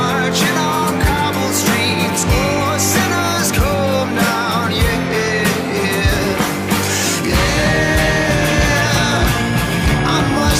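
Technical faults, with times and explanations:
7.57 to 10.6 s, switching supply whistle: a thin, high whistle wandering between 1.6 and 1.7 kHz sits roughly 15 dB below the sound until the end. A switching power supply is cycling in an audible burst mode, and its rate drifts with load.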